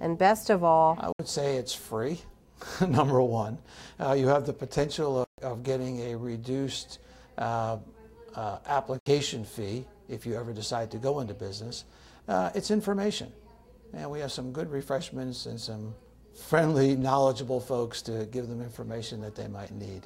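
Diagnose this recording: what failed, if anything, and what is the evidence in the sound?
The sound cuts to silence at 1.12–1.20 s, 5.24–5.38 s and 8.99–9.06 s, gaps of about 70, 140 and 70 ms, then resumes further along as if it had kept playing. This is likely a Bluetooth dropout at the playback stage: late packets to the headphones were discarded, and the whole-multiple gap lengths suggest several packets lost together.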